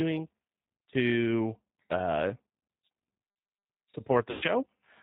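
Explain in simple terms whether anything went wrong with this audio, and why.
The whole clip has passed through the G.729 codec, which drops everything above 4 kHz and rebuilds the speech from a simplified model, so it sounds rough and slightly synthetic. From 4.31 to 4.44 s there is VoIP packet loss concealed by the speech codec: about 100 ms of audio went missing, and the decoder filled the gap with a fading guess at the previous sound.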